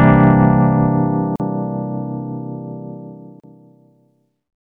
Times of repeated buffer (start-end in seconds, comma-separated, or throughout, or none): none